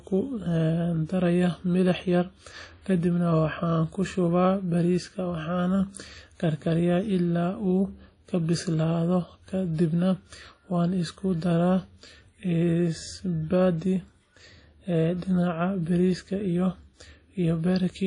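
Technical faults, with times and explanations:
Throughout, WMA compression: the speech sounds washy and ringing, with a hiss that swells and fades with the voice and nothing above about 10.1 kHz. This is likely a low-bitrate transform codec, around 32 kbps, smearing quantisation noise across long blocks and zeroing weak detail.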